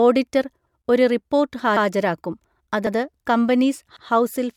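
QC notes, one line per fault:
1.77 to 4.07 s, overlapping chunks: at 1.77, 2.87 and 3.97 s the sound stutters as 100 ms is played twice. Each 1-second chunk begins before the previous one finishes, so every join repeats a short slice, giving a regular hiccup.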